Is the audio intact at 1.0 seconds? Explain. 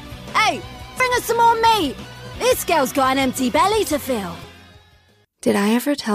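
No. At 1.0 s there is damaged data in a compressed stream: corrupted bytes make the decoder misread those frames, lose sync and search for the next valid frame header. The dropout is heard as a short chirp or blip.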